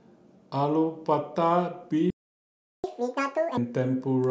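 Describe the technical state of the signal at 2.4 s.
At 2.4 s the speech is cut by a playback stall from 2.10 to 2.84 s. The output goes silent for 0.74 s, likely because the player ran out of data.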